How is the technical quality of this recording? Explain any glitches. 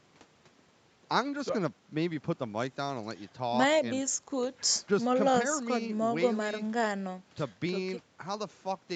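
The technical quality of this recording is sound and there are no glitches to explain, with the speech carried through a call path whose Opus codec keeps the band below about 8 kHz.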